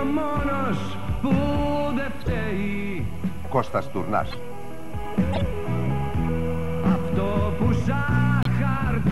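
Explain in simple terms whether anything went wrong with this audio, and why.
Something did go wrong. There are four short chirps or bursts of noise, at 2.21 to 2.28, 4.31 to 4.38, 5.33 to 5.41 and 8.43 to 8.47 seconds. Each is a corrupt frame decoded: a few damaged chunks of compressed data were played anyway, scrambling the sound briefly.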